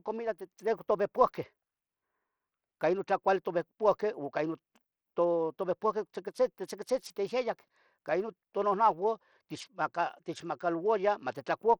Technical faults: Bluetooth SBC compression

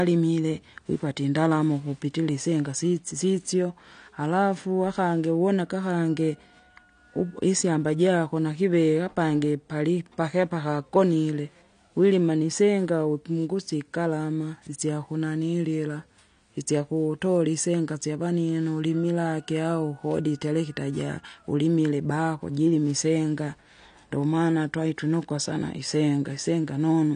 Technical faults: AAC compression

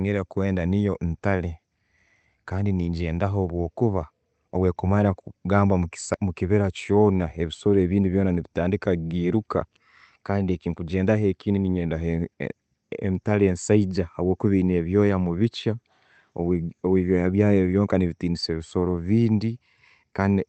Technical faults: none

